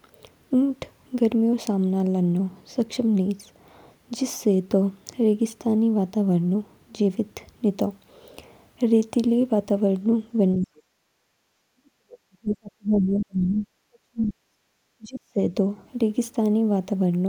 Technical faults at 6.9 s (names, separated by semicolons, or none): none